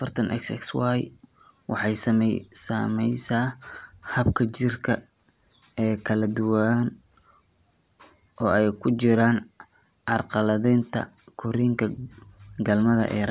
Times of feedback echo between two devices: none

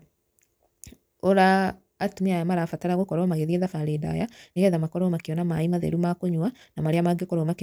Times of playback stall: none

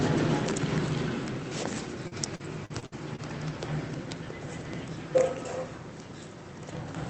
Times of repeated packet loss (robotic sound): 2.07-3.20

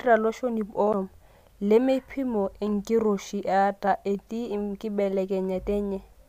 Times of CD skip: 0.93

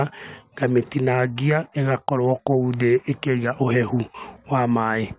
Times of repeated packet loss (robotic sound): none

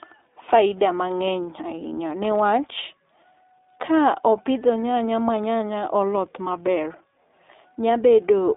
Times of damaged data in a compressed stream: none

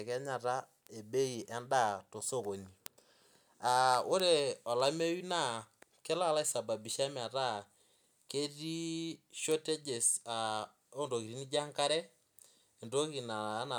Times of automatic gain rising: none

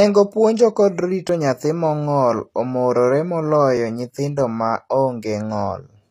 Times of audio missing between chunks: 1.29, 3.77

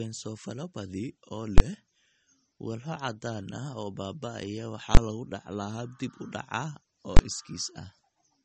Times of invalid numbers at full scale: 1.58-1.60, 4.95-4.97, 7.17-7.19

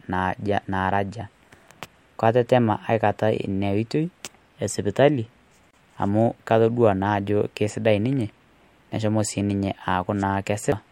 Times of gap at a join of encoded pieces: 5.71-5.73

